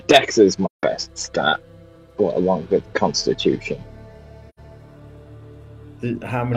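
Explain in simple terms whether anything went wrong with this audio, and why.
Two short silences at 0.65 to 0.83 s and 4.49 to 4.59 s are AAC frame loss with muting: chunks of the compressed stream went missing, so the player filled them with nothing. The sound fades out and back in, unlike a hard dropout.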